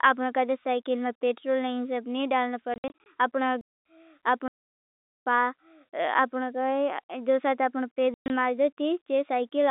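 Packet loss filled with silence first appears from 2.74 to 3.06 s. About 160 ms of audio drops out in scattered holes across a 320 ms stretch, the longest lasting 60 ms. Each gap starts and ends abruptly, and the hole lengths step in 20 ms units, which points to 20 ms packets. The receiver put nothing in their place.

A playback stall follows from 3.61 to 3.85 s. The sound halts in mid-flow for about 240 ms and then resumes. The cause is likely the player running short of data or its thread being held up briefly, rather than anything lost on the line.

Packet loss returns in a long solid block from 4.48 to 5.18 s, silencing 780 ms of the telephone-band sound. A last cluster lands from 8.14 to 8.30 s, where 140 ms is missing within 160 ms and one run reaches 120 ms.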